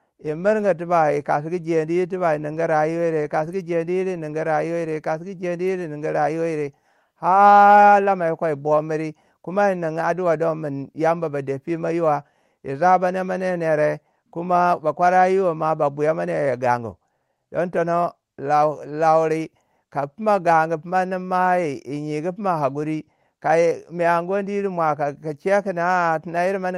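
Nothing goes wrong anywhere in this speech recording; it just has the familiar character of audio carried over an Opus call link, with the top end rolled off at around 12 kHz.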